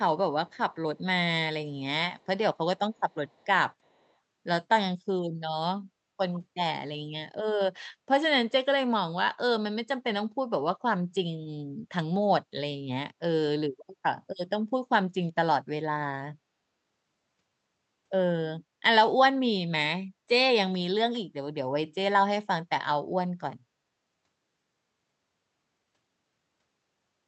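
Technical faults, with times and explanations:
0.50–0.57 s, 2.19–2.26 s, 2.77–3.46 s and 3.85–4.13 s, echo leak: a very faint copy of the speech returns 354 ms late, likely loudspeaker pickup missed by echo cancellation. It sounds like a discrete repeat, not reverb's smooth tail.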